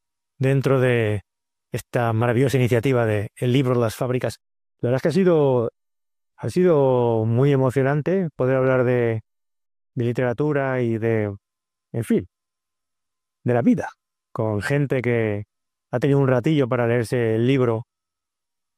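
No technical faults can be heard anywhere in this audio. Nothing in the sound points to a problem in how it was captured, processed or delivered.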